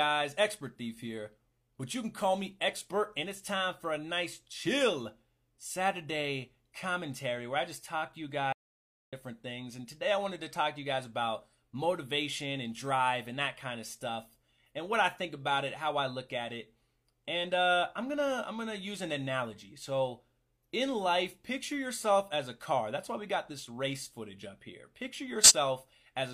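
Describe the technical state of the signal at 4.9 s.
At 4.9 s the signal is intact, with no dropout, distortion, glitch or other audible fault at that point.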